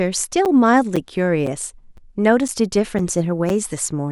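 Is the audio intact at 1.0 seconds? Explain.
No. A gap between chunks falls at 0.96 s. Silence of about 7 ms sits at a join between half-second chunks, heard as a brief hole.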